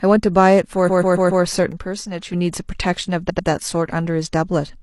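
From 0.84 to 1.40 s, repeated frames: a run of compressed frames was sent more than once, so the decoder plays the same 139 ms block of speech four extra times. The result is a stutter, a short stretch looping, and it adds about 0.56 s to the clip. The block length fits a run of about three codec frames.

Between 1.72 and 2.33 s, the likely cause is one channel dropping out of a stereo feed before it was summed to mono. The speech suddenly falls by about 6 dB and recovers just as abruptly.

From 3.25 to 3.44 s, repeated frames occur again, this time as a shorter 93 ms block played two extra times. It is heard as a quicker double stutter and adds about 0.19 s.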